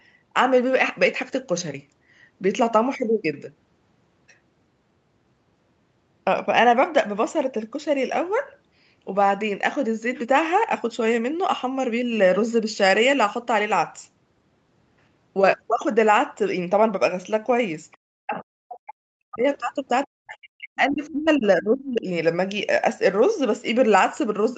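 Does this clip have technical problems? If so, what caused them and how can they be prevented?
Yes. Other side's voice leaking through appears at 17.92–17.97 s and again at 21.03–21.12 s as brief scraps of a second voice, the first very faint and the second somewhat louder but still well below the main talker. The likely cause is the far end playing on a loudspeaker and reaching the microphone, with the echo canceller leaving a residue it failed to subtract. Better acoustic isolation, such as a headset, or a better-converged echo canceller would prevent this.

Speech suppressed in double talk shows as deep dips in the talker's level at 18.03–18.07 s, 18.23–19.46 s and 20.05–22.08 s, with the voice falling away almost entirely in places while the far side is active. This is likely the echo canceller's suppressor treating the overlap as echo and pulling down everything, including the near-end talker. 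A canceller with reliable double-talk detection and gentler suppression, or a headset that removes the echo path, would prevent it.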